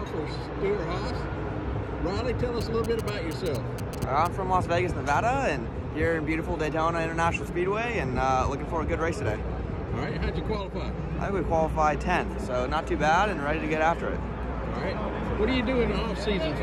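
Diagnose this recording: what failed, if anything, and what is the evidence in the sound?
In the analogue wiring, a circuit rectified radio bursts from a nearby 2G phone: GSM signalling bursts. From 2.61 to 4.27 s, a galloping dit-dit-dit of short 217 Hz buzzes sits about 15 dB below the sound, marking a phone signalling.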